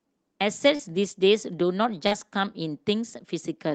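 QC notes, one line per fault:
0.75–0.81 s and 2.07–2.13 s, short concealed packet loss: about 40 ms of audio missing at each point on the Opus call path. The receiver bridged each gap by extending the preceding sound, then crossfaded back. The result is a brief smear or wobble where detail dropped out.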